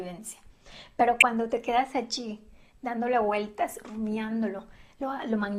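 Bit errors slipping past error correction into the MP2 data, at roughly 0.2 percent, cause DAB burbling from 1.20 to 1.22 s, a brief burst of noise blips in single sub-bands.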